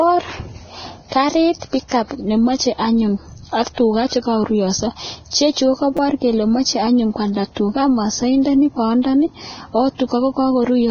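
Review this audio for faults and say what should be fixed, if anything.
Nothing sounds above 6.5 kHz, and the treble is grainy throughout, likely from heavy Vorbis compression at a very low bitrate. Encode at a higher quality setting.

At 5.97 s, a repeated buffer gives a brief buzz: a 5.8 ms slice plays three extra times, which fits a 256-sample buffer. Enlarge the playback buffer to prevent underruns.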